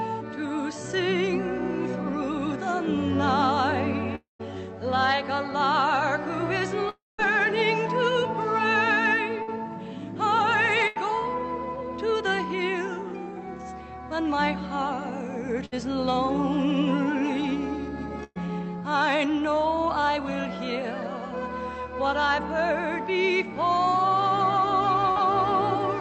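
The audio carries gaps and patched-over holes typical of a lossy call connection, heard over a band that stops near 8 kHz, which fits Opus at around 64 kbps. The two longest breaks, at 4.15 to 4.41 s and 6.89 to 7.20 s, are each a long network dropout, likely caused by the stream stalling for about a quarter to a third of a second. The last sound is drawn out into a fading buzz or hiss and then falls to near silence for about 140 ms and 190 ms, and the audio resumes further on with roughly 240 ms and 300 ms missing. A spectrogram shows smeared, flattened harmonics sliding into an empty vertical band. The waveform shows the envelope decaying to a flat line before a sudden restart. Four shorter gaps are each a burst of packet loss, at 9.42, 10.87, 15.65 and 18.24 s, skipping about 60, 80, 60 and 120 ms. In each, the receiver extends the preceding sound as a dimming held tone or hiss, and at 18.24 s it briefly drops to silence for about 20 ms. 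On a spectrogram these are short stretches of frozen, horizontally streaked energy ending in a hard seam where the audio jumps ahead, and the waveform shows a tapering copy of the previous cycles. At 25.11 s a short concealed packet loss of about 40 ms leaves a quick smear where the decoder synthesised a fill and crossfaded back. It shows as a faint blurred column in the spectrogram and a small kink in the waveform.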